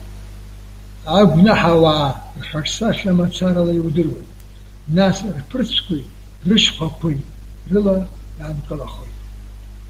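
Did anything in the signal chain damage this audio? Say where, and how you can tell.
Yes. An adaptive stream switches to a lower bitrate from 2.87 s to 8.87 s, a network-stage fault that plays out in the codec. With no gap, the speech suddenly drops in quality with more codec artefacts, then snaps back at 8.87 s. The slowed connection made the player fetch a cheaper encoding, and the sound fits a step from Opus at 64 kbit/s down to 16 kbit/s.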